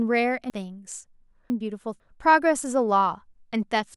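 From 0.5 to 2.0 s, chunks out of order jumble the speech. The 500 ms block due at 0.5 s arrives two chunks late and plays at 1.5 s, with hard joins at 0.5, 1.5 and 2.0 s. Unlike a dropout or repeat, nothing is missing or doubled.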